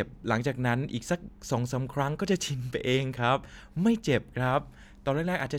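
No technical faults can be heard anywhere in this speech recording. Nothing interrupts or disturbs the sound at any point.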